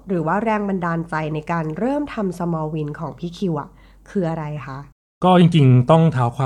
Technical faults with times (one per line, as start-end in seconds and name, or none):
none